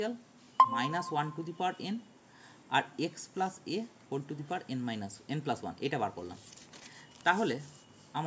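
No technical faults detected.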